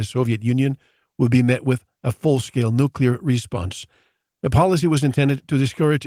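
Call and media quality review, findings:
Nothing stood out on listening to this speech clip.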